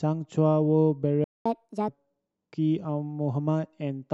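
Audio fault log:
1.24–1.46 s: playback stall. The speech cuts to silence mid-flow for about 214 ms, then resumes from where it stopped. This is likely the player running out of buffered data or its output thread being blocked, leaving nothing to send until it recovered.
1.46–1.88 s: catch-up at higher speed. Immediately after the gap the speech runs at 1.5 times normal speed, with pitch raised by around seven semitones, because the backlog is resampled to recover the lost time. Both return to normal at 1.88 s.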